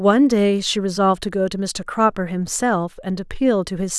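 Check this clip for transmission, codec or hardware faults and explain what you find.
No faults found anywhere in this speech recording.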